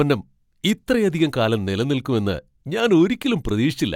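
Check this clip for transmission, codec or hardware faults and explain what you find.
Nothing in this speech clip points to a fault of the kind asked about. There is no event in the audio that calls for an explanation.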